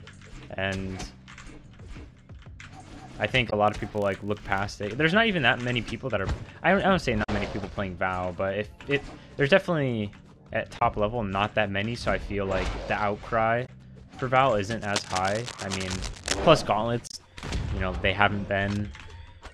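A short glitch at 3.49 to 3.53 s is damaged data in a compressed stream: corrupted frames throw the decoder out of sync until it finds the next frame header. From 3.68 to 4.72 s a steady 50 Hz buzz of ticks tracks the level, from a filter restarted on every block, each block starting from silence. Further glitches from the same damaged data come at 7.22 to 7.29 s, 10.78 to 10.82 s and 13.65 to 13.69 s. From 14.81 to 16.39 s, rough scratching nearly as loud as the sound itself is cable scratch noise, likely from a worn cable or connector being moved. A last glitch of damaged data is at 17.07 to 17.14 s.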